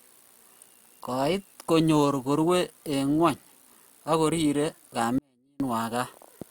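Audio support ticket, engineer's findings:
Audio dropout to a faint residue, 5.18–5.60 s in the speech: about 0.42 s lost, abrupt cut and return, gap holds only a faint leak roughly 40 dB down. Likely a brief upstream signal loss with the downstream path staying live.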